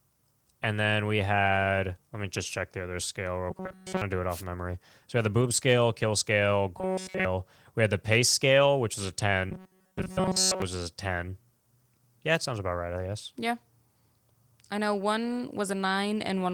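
Spoken audio with three stretches of rigid, metallic buzz at 3.51–4.02 s, 6.78–7.25 s and 9.51–10.62 s, pitched at 188 Hz, which is robotic sound from repeated short buffers, likely from a roughly 5 ms slice replayed throughout each stretch. At 4.29–4.44 s a brief swish of static is a wireless microphone noise hit, where the FM radio link faded and receiver noise rose. A short, rougher and noisier patch at 5.41–5.43 s, without any gap, is a lost packet rebuilt from error correction, which points to a single 20 ms frame restored from a low-bitrate redundant copy.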